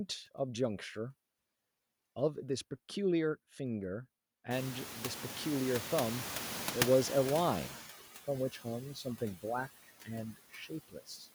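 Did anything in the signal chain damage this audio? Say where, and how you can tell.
Yes. All three faults come from the call-processing stage, specifically the noise suppressor.

Noise suppressor artifacts run through the whole clip, with about 14 dB of reduction. The background sinks between phrases and swells back under the speech. A codec artefact wouldn't follow the speech this way. The pumping tracks each frame's speech/noise decision.

The noise suppressor is catching up from 4.5 to 7.83 s. The room noise is genuine: it jumps about 25 dB near 4.5 s and settles about 12 dB below the speech. At first only about 9 dB is removed, and the reduction deepens over roughly 3.3 s as the noise estimate adapts. A gain fault would shift everything at once instead of this slow settling.

Speech is cut by the noise suppressor at 9.83–10.09 s, 10.34–10.71 s and 10.88–11.27 s, with dips of about 15, 16 and 17 dB. 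Parts lasting a tenth to a third of a second were mistaken for noise and turned down. Unlike a dropout, the sound fades and swallows rather than going silent.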